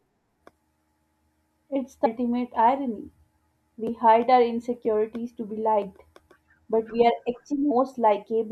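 A speech recording with damaged data in a compressed stream at two points. Brief glitches sound at about 2.05 s and 7.7 s, each lasting under 20 ms. Both come from corrupted bytes in the encoded file. The decoder reads bad frame data there and loses its place. It then hunts for the next valid frame header before normal playback resumes. The result is a short, harsh blip cutting into the speech.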